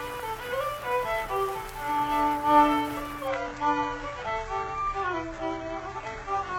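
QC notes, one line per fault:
3.28–6.59 s, adaptive stream at a lower bitrate: the audio switches abruptly, with no gap, to a much poorer rendition and stays there to the end. Nothing is present above 8 kHz. Codec artefacts rise. The step change fits a player dropping from a roughly 96 kbit/s stream to a very low-bitrate HE-AAC variant, likely because the connection slowed.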